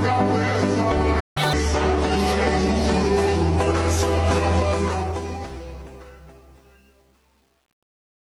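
At 1.20 s a playback stall begins, most likely because the player ran short of buffered data or its thread was held up. The output drops to silence until 1.37 s, a gap of roughly 0.16 s that cuts the sound off mid-flow.

From 1.37 to 1.53 s comes catch-up at higher speed. The player resamples its backlog to recover the lost time, running at 2.0 times normal speed. Because speed and pitch are tied together in plain resampling, the sound jumps up by roughly ten semitones and turns chipmunk-like and hurried. At 1.53 s it drops back to normal rate and pitch.

From 4.71 s to the end there is truncation distortion on the fade. The gain stage runs the fade-out at only 9 bits with no dither. As the level sinks toward the smallest available step, the waveform collapses into a few coarse square steps. The fade runs to the end at 8.32 s with a gritty, buzzy texture riding on it. That texture is worst from 5.71 s onward, in the quiet tail.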